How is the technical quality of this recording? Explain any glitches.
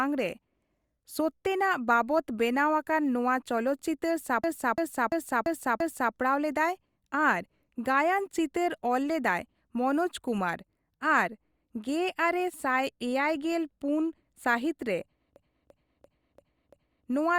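The recording has two glitches of the same kind, a system hang loop. Between 4.44 and 6.14 s, and again between 15.36 and 17.07 s, the system froze while the sound hardware kept replaying its ring buffer, which fits a 16384-sample buffer. One 341 ms chunk repeats five times at about 2.9 per second, a machine-gun stutter.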